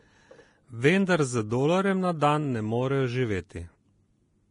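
Throughout, the speech stops at 10.6 kHz and its treble is hissy and grainy, likely heavy Vorbis compression near 29 kbps. Unlike plain low-pass filtering, noise replaces the detail.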